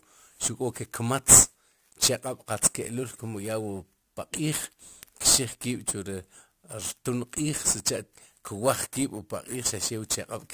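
Throughout the speech, the audio shows aliasing. The sample rate appears to have been dropped without an anti-alias filter first, in a way that fits a conversion from 48 kHz to 32 kHz. Content above 16 kHz had nowhere valid to go, so it folded back below that edge as false, unrelated frequencies, roughly 10 dB under the signal. Sibilants come out gritty and metallic, and the spectrum stays dense right up to 16 kHz.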